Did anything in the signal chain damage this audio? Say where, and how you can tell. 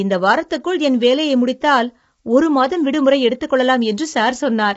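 Yes, at the codec: throughout, a rough, grainy speech texture with noise between harmonics and nothing above 7.7 kHz, likely low-delay AAC compression at a low rate; a plain low-pass would stay clean.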